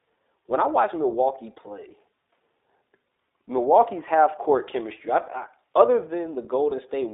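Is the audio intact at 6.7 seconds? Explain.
No. From 6.70 to 6.73 s there are lost iLBC frames: a gap about 20 ms long, which fits a single lost 20 ms packet. The decoder fills it by repeating the last pitch cycle blended with noise, so the moment sounds like a brief held, slightly buzzy vowel rather than a click or a silent hole. That sets it apart from a plain dropout. Because each iLBC frame is decoded independently, the sound recovers cleanly right after, with no smeared tail as with codecs that carry state forward.

Underneath this, and at every other moment of the clip, the iLBC codec itself is plainly audible. At 15.2 kbps it codes each 20 ms frame's excitation on its own, and the line band runs only from 300 Hz to 3.7 kHz. The result is thin, slightly rough and synthetic speech. Unlike a simple low-pass filter, it adds that coded, grainy texture on top of the missing highs.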